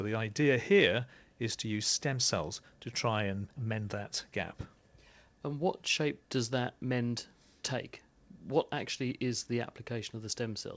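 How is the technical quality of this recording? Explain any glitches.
The technical quality holds steady, with no glitches to explain.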